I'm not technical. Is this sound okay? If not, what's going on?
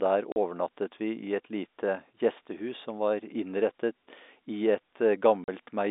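No. There are two short dropouts, at 0.32 seconds and again at 5.44 seconds, each about 40 milliseconds long. This is packet loss filled with silence. The speech traveled in small chunks, a couple of chunks went missing, and the receiving end played nothing in their place. The gap length suggests two 20-millisecond chunks lost each time. The sound cuts out abruptly, so you hear tiny holes with hard edges. The narrow, phone-like tone is just the telephone line.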